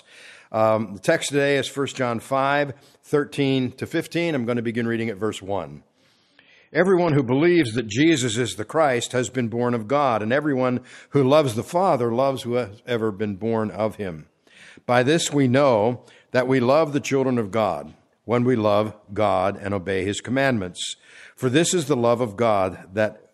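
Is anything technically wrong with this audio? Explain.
Yes. Adaptive stream at a lower bitrate, from 6.16 to 8.16 s: the player briefly switched to a leaner encoding, which fits a step from 96 to 24 kbit/s AAC. The treble disappears above 14.4 kHz, compression artefacts thicken, and full quality snaps back abruptly without a gap.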